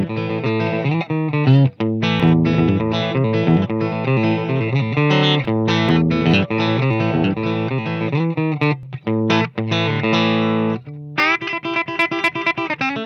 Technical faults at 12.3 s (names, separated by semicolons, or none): none